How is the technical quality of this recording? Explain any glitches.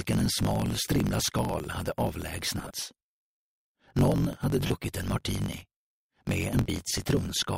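The technical quality is poor. A steady buzz and a sped-up feel run through the whole recording, and four brief dropouts add smeared, noisy patches.

Block size mismatch (truncated), throughout: a constant buzz at about 46.9 Hz sits under everything, and the audio moves about 1.12 times faster than normal while keeping roughly its usual pitch. One stage hands over longer blocks than the next stage reads, so the tail of every block is discarded. The buzz comes from those cuts repeating at the block rate, which fits a 1024-sample read block. The missing tails shorten the timeline, which speeds up the audio without shifting its pitch.

Lost LE Audio frames, at 0.43–0.45 s, 2.58–2.71 s, 4.66–4.70 s and 6.61–6.69 s: any tonal content briefly turns into a hissy, grainy smear. The lost time is about 30 ms, 100 ms, 40 ms and 50 ms. In the second and fourth events the gaps are scattered over about 140 ms and 80 ms, in short runs of roughly 30 ms and 20 ms. 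When a Bluetooth frame fails to arrive, the LC3 decoder repeats the last spectrum with randomised signs, which produces the noisy texture. The spacing of the gaps fits 10 ms frames.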